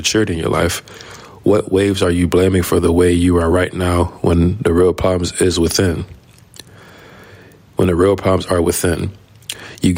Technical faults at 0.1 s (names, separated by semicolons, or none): gain pumping